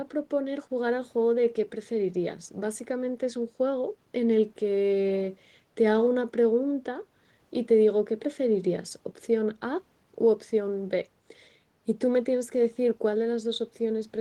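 No technical faults can be heard anywhere in the speech. There is nothing to mark at any point in the recording.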